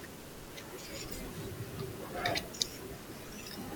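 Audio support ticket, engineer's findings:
Speech clip, one glitch worth flagging.

Damaged data in a compressed stream, 1.09 to 1.13 s: short glitch, about 44 ms. Probably the decoder stage: corrupted bytes in the stream, so the frames there decode as garbage or get dropped while it hunts for the next good frame header and resyncs.

Worth checking the source file or the transport for corruption around that point.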